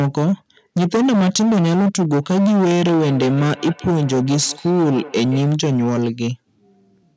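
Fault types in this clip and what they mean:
hard clipping: The speech is driven about 14 dB past what the stage can pass. Around a third of it is flattened, giving harsh fuzz throughout.
feedback echo between two devices: Another device replays this microphone, which hears it again. From 3.01 to 5.43 s, thin repeats return roughly every 200 ms, about 17 dB down.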